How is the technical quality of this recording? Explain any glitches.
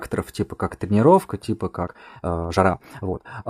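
The recording has one clear glitch: a time-stretched section from 1.80 s to the end at 3.49 s, right after "типа как тренировка типа". The pace suddenly jumps to about 1.76 times normal while pitch stays put, likely because software squeezed this part to fit a length by dropping short slices, leaving it rushed.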